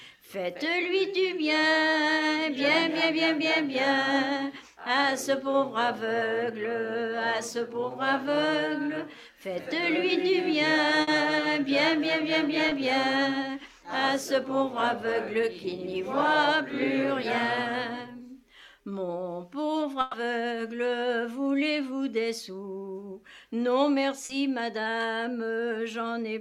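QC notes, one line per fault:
11.01–11.09 s and 20.01–20.15 s, burst of packet loss: about 60 ms and then 120 ms of audio never arrived. The receiver stretched the last sound and let it fade, so each gap becomes a held buzz or fading hiss before playback jumps ahead. On a spectrogram, the harmonics or noise go flat and frozen, then cut abruptly into new content.
12.69–12.73 s and 24.25–24.31 s, short concealed packet loss: roughly 20 ms and then 40 ms were missing and were patched by extrapolating the preceding sound, then cross-faded back. Each one is a brief smear or wobble. The waveform shows a short, overly regular stretch, and the spectrogram shows slightly blurred, repeated texture.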